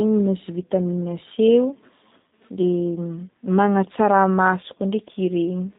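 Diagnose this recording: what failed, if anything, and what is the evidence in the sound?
G.729 codec damage runs through the whole recording, a fault at the codec stage. The speech has nothing above 4 kHz and sounds slightly rough and synthetic, with a buzzy, plainly audible coarseness, which fits an 8 kbit/s low-rate coder such as G.729A. Rather than carrying the waveform, the coder rebuilds each 10 ms frame from a vocal tract filter, a pitch predictor and a few pulses, so fine detail and high-frequency energy are lost.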